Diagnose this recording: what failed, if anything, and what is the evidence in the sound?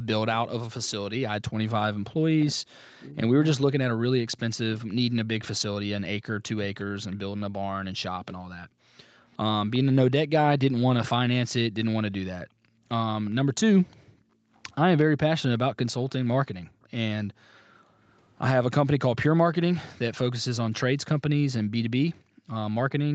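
Speech suppressed in double talk, 0.66 to 6.91 s, in the call processing stage: the speech dips by as much as around 40 dB over about four seconds in total. The likely cause is the echo canceller mistaking the near talker for loudspeaker echo while both sides spoke, and attenuating everything.

Echo leak, 6.81 to 9.79 s and 13.25 to 19.53 s: a faint copy of the speech follows it 360 ms later, roughly 25 dB down. This is likely residual loudspeaker pickup that the far end's echo canceller failed to subtract, returned through the call path.

Background gated by the echo canceller at 8.68 to 9.04 s, 12.46 to 14.52 s, 16.7 to 17.97 s, and from 22.16 s to the end: the room tone drops by up to about 40 dB. The canceller's suppressor clamps the microphone while the loudspeaker plays, then releases.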